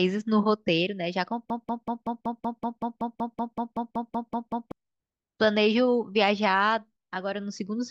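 At 1.5 s the speech catches on a short fragment and a broken-record loop begins. A piece about 0.19 s long plays again and again, back to back, with no gap. It repeats 17 times, until 4.72 s. The result is a rapid, mechanical stutter over more than three seconds. The likely cause is a stalled player or stream that kept resending the last chunk it held. Whatever should have played in that span is lost.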